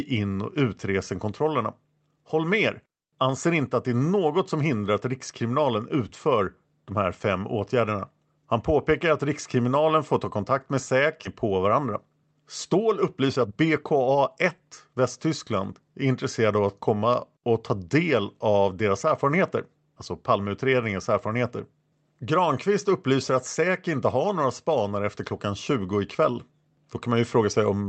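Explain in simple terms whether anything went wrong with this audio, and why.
A couple of things went wrong. At 11.25 s there's a skip ahead: roughly a second of speech was thrown away and playback jumps straight to later audio with no gap, so the two sides butt together and part of what was said simply vanishes.

Shortly after, the speech picks up pace twice, a jitter buffer speed-up. From 11.81 to 12.35 s it runs about 9% fast, and from 13.04 to 14.59 s about 18% fast. The receiver had a backlog and trimmed tiny slices of sound to catch up, so it sounds rushed but keeps its pitch.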